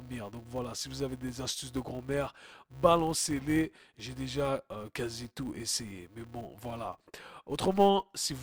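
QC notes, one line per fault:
Throughout, filter restarted on every block: there's a steady 200 Hz buzz riding under the speech, and it swells and fades with the level of the voice. The filter seems to drop its memory at each block boundary and start again from silence, so every block opens with a tiny transient. Those clicks land 200 times a second, which points to blocks of about 5 ms, and they fuse into a buzz instead of separate ticks.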